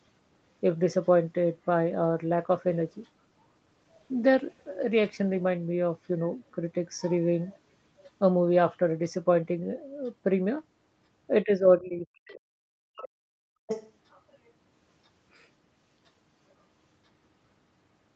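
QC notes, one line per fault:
1.86 to 6.03 s, call bitrate drop. The sound turns rougher and watery, with less detail in the upper range. The encoder's rate fell from 32 kbps to 15 kbps and stayed near the bottom for about 3.7 s. With fewer bits, Opus quantises each frame more coarsely, so noise and smearing creep into the signal. Above 6 s the texture clears as the rate climbs back toward 32 kbps, where the band reaches up to 8 kHz.
11.44 to 13.39 s, speech suppressed in double talk. The speech dips sharply, at its deepest by around 40 dB. Altogether roughly one and a half seconds are affected. The likely cause is the echo canceller meeting both sides talking at once. It cannot tell the local talker from the loudspeaker echo, so it attenuates everything in the microphone signal.
12.29 s and 13.67 to 13.91 s, other side's voice leaking through. A second voice slips in underneath. The first is a faint scrap, about 30 dB below the speech. 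The second is longer and much louder, only around 10 dB down. This is likely residual echo from the far end playing on the talker's loudspeaker, which the canceller failed to remove from the microphone.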